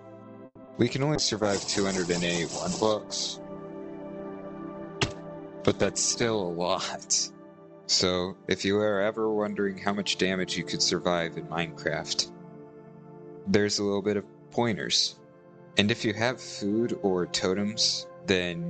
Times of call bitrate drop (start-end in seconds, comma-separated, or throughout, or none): 1.16-7.60